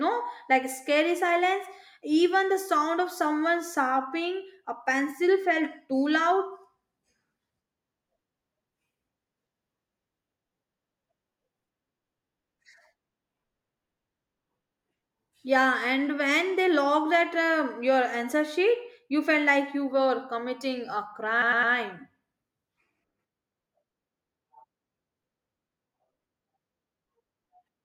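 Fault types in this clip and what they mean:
Repeated frames: from 21.41 to 21.72 s, a 104.5 ms stretch of the compressed stream is decoded three extra times, so the speech stutters on one fragment and runs 313.5 ms longer. The block length fits a run of four codec frames.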